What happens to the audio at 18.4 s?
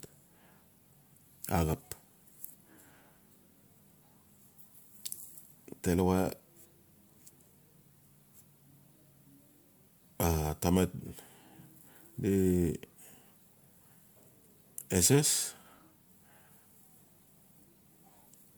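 At 18.4 s the speech carries generation loss, as it does across the whole clip. The sound is swirly and hollow, with smeared consonant attacks. It is worse than a single lossy pass would give. The likely cause is repeated MP3 encoding, about three times, at a rate that fits 128 kbit/s. Each decode and re-encode quantised on a shifted frame grid. So the noise stacked up. Content still reaches about 20.1 kHz.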